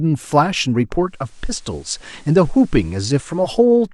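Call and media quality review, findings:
Digital radio blending to analogue, 0.96–3.67 s. Hybrid receiver drops digital and cross-fades over 470 ms to the FM broadcast of the speech, then returns. Faint hiss well below the signal. Level shifts about 1 dB.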